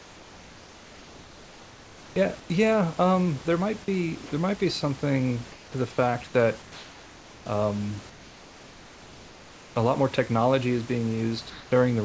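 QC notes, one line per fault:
0.00–2.16, 2.40–2.50, 5.52–5.74, 6.62–7.46, 8.10–9.76 and 11.50–11.72 s: comfort noise in place of the background. The room tone, sitting about 23 dB under the loud speech, turns into a smooth, featureless hiss, mostly about 3 dB quieter (about 4 dB at 5.52, same level at 11.50). That's likely discontinuous transmission, with the receiver filling pauses with synthetic noise.
4.26 s: sound dropped by the voice detector. About 30 ms of real sound vanishes inside a 60 ms patch of that same flat noise, then the audio snaps back. The detector likely misread that sound as background and stopped sending, so comfort noise stood in.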